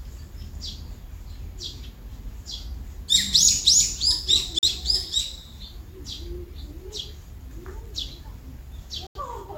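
At 4.59 to 4.68 s and again at 9.07 to 9.20 s, digital broadcast dropout mutes the audio as the receiver discards corrupted frames, the gaps fitting one and two lost frames. Unlike an underrun, nothing stutters or repeats; the programme simply resumes further on.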